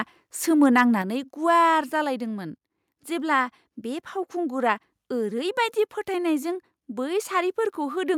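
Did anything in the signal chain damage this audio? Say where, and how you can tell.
Yes. Microphone overload appears from 0.63 to 0.81 s. The loudest peaks turn harsh and crackly, going about 2 dB past full scale. Around one percent of samples are flattened. The likely cause is input gain set too high at the converter stage.

Microphone volume stepped down twice, at 1.02 s and 2.04 s. Voice and background drop together, first by about 5 dB, then by about 2 dB. The first drop comes right after the distorted peak. This is likely call processing cutting the device input volume.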